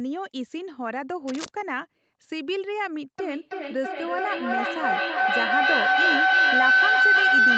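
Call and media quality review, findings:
Cable scratch noise, 1.28–1.49 s. Dense, uneven rustling burst riding over the speech at about -5 dB relative to signal. Likely a worn cable or connector being moved, with contact resistance fluctuating rapidly. Distinct from a packet-loss glitch: no gap or clean click, just ragged broadband scratching.

Feedback howl, 3.19 s to end of clip. Tone builds at roughly 1.5 kHz, pulsing about every 300 ms, peaking about 11 dB above speech. Acoustic loop between two devices on one call, with gain above unity per round trip. Unlike steady hum, it grows and pulses at the loop delay.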